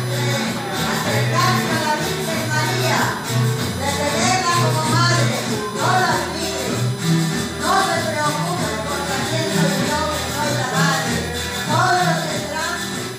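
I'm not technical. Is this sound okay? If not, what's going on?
No. USB whine: the USB connection leaks electrical noise into the audio, adding a steady, fairly loud high-pitched tone, sharpest around 4 kHz, throughout.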